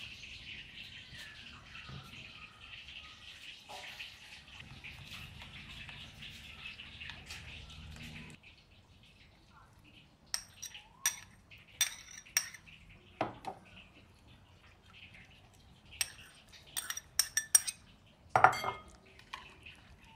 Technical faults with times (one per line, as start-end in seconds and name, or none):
none